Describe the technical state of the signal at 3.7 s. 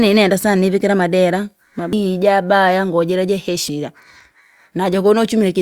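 At 3.69 s, just after "ije abaya ngoo jira", there is a burst of damaged data in the compressed stream. Corrupted bytes make the decoder misread the affected frame and lose sync while it hunts for the next valid frame header, producing a brief, sharp blip in the speech.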